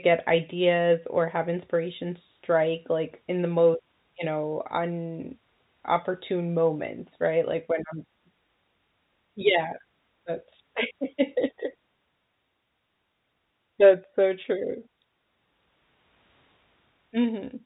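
No faults in the speech; the G.711 telephone coding behaves as expected, with the band topping out at 4 kHz.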